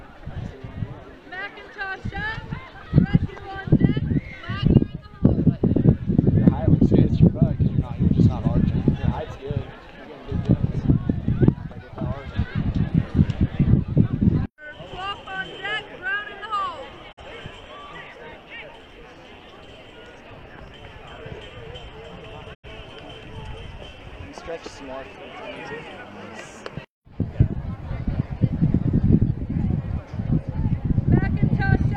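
At 17.11 s and again at 22.53 s the receiver lost valid frames and muted, a digital broadcast dropout. The sound fades out over 20 ms into silence, returning at 17.23 s and 22.68 s; the gaps fit one and then two lost frames, and that audio is gone.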